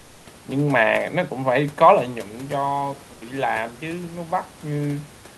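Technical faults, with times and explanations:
2.58 to 5.38 s, automatic gain rising: after the talker moves back from the microphone at roughly 2 s, the input falls by about 9 dB, and the automatic gain control slowly raises its gain to compensate. Voice and room noise swell together over almost three seconds rather than jumping. On a waveform the envelope widens steadily to the end. On a spectrogram the background floor between syllables brightens along with the speech.
3.13 to 3.21 s, comfort noise in place of the background: for about 80 ms during a pause, the real room background, which sits about 22 dB below the loud parts, is swapped for a smooth, featureless hiss about 5 dB quieter. This is likely Opus DTX: the sender stops transmitting in the gap and the receiver fills it with synthetic noise. A spectrogram shows a short, uniform band that has lost the background's texture. The waveform shows a brief, flatter, lower patch.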